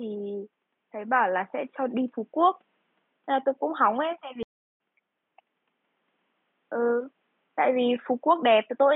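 At 4.43 s a stream reconnect cuts the speech to silence for 0.31 s, a flat gap on the waveform. The audio then resumes roughly 0.3 s further on, beginning with a brief fade-in.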